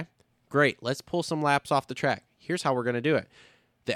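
Nothing in the speech recording stood out as a technical problem on listening.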